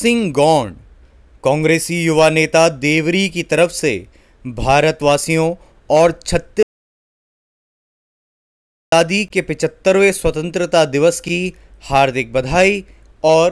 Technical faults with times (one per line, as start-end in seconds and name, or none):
6.63-8.92 audio dropout to silence